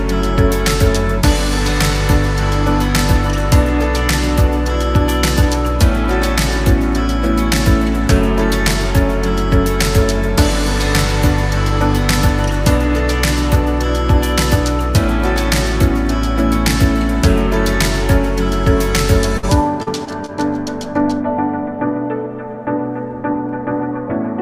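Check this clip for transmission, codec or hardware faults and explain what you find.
The clip has a cluster of network losses between 19.4 and 20.3 s: one burst of packet loss followed by three short concealed packet losses.

Burst of packet loss, 19.37 to 19.45 s: about 60 ms of audio never arrived. The receiver extended the last sound for roughly 53 ms while fading it out, so it comes across as a brief held buzz or hiss before the audio jumps ahead. On a spectrogram this appears as a smeared, stretched band that dims, followed by a clean break where the content resumes.

Short concealed packet loss, at 19.83 to 19.88 s (about 40 ms missing), 20.05 to 20.09 s (about 20 ms) and 20.26 to 20.30 s (about 20 ms): each hole was patched by continuing the preceding sound, pitched or noise-like, and then blending back into the real signal. These are heard as quick smears or wobbles. In the waveform, the repeated cycles or a flattened envelope are visible at each spot, and on a spectrogram there is a short blurred patch.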